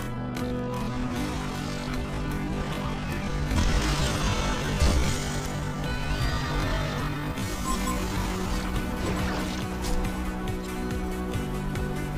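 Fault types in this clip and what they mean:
Time-stretched section: Software likely stretched the opening of the audio to fill a longer span, holding pitch steady by repeating short slices rather than slowing the playback itself. From the start to 8.52 s the material runs at about 0.55 times its natural pace, so it drags, while the pitch stays where it should be. At 8.52 s the pace jumps abruptly back to normal.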